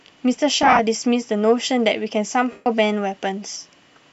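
Lost LE Audio frames hit this speech twice, and the decoder filled each gap by reusing the last spectrum with scrambled signs. From 0.63 to 0.80 s, scattered short dropouts blur into a grainy smear. From 2.51 to 2.66 s, an unbroken gap smears and fades toward silence.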